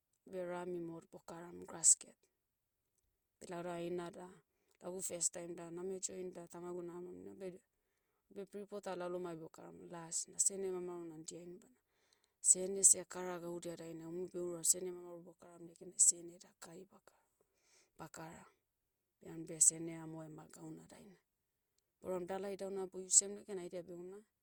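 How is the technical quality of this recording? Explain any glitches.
The recording is degraded throughout by generation loss. For the whole speech clip, the sound is swirly, smeared and hollow, with blurred consonant attacks. The likely cause is repeated lossy re-encoding, consistent with about three passes through Opus at around 64 kbit/s, each adding fresh quantisation noise.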